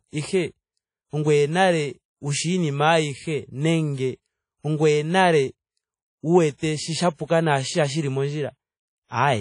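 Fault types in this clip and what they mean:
WMA compression: The speech sounds washy and plainly ringing from start to finish, with a hiss that swells and fades along with the voice, and nothing is heard above 10.1 kHz, so the top end is dull. The likely cause is a transform codec such as WMA at a low bitrate, consistent with a stream of about 32 kbps. Its quantisation noise smears across tens of milliseconds around each sound, and weak high-frequency detail is discarded entirely.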